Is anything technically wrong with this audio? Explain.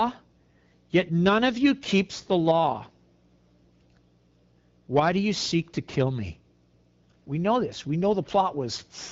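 No, nothing is technically wrong: the speech carries the light coding character of the AMR wideband (HD Voice) codec, band-limited near 7 kHz with a clear, unroughened quality consistent with a rate around 12.65 kbit/s, which is that codec working as intended.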